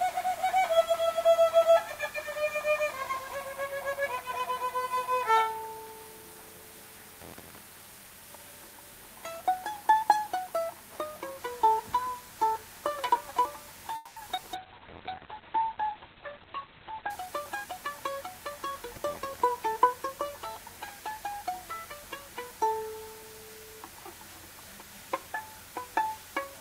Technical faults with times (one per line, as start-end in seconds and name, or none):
13.95-14.18 call audio freeze
14.36-14.44 short concealed packet loss
14.55-17.15 call bitrate drop
16.01-17.65 jitter buffer speed-up